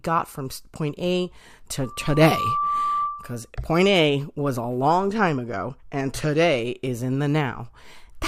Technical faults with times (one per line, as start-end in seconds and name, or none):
1.83-3.50 loudspeaker feedback squeal